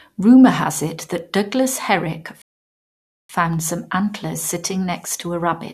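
At 1.18 s, just after "has it", a bit error spike lands: a flipped bit throws two consecutive samples far off their true value before they snap back. It is a single sharp tick, seen as a two-sample vertical line on the waveform and a thin full-band stripe on the spectrogram.

From 2.42 s to 3.30 s a rebuffering stall cuts the speech to dead silence while playback waits for more data, then resumes intact with "some antlers". The waveform flatlines and the spectrogram goes blank for about 0.88 s, adding time without losing anything.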